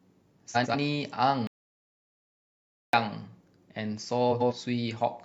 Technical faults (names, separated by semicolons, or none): frames out of order; audio dropout to silence